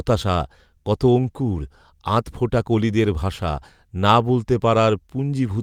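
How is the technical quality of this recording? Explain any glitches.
One glitch occurs in this speech recording. A lost packet rebuilt from error correction at 1.23–1.29 s: the next packets carried low-bitrate copies, so about 40 ms, likely two packets, plays back rougher and noisier without a gap.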